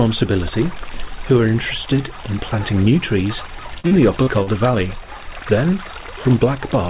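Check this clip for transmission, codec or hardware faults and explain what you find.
One transmission fault stands out, heard through a narrowband call path that stops at 4 kHz, which fits G.711 coding. From 3.8 to 4.5 s there is repeated packet loss (robotic sound). Audio packets went missing in four quick gaps, the longest 40 ms, and each was patched by extending the previous sound. About a fifth of that stretch is concealed, so it turns choppy, with pieces dropped.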